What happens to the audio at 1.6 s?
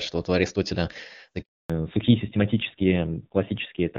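At 1.6 s the call is in a handover gap: the phone is switching networks and no speech frames arrive from 1.42 to 1.70 s. The speech dies away within a few tens of milliseconds and stays silent for 280 ms, so anything said then is lost.

When the sound resumes at 1.70 s, there is a fallback to narrowband. The call has dropped from HD Voice to an older narrowband codec, and nothing above 4 kHz survives to the end. The speech sounds duller and rougher, which fits a low-rate narrowband codec.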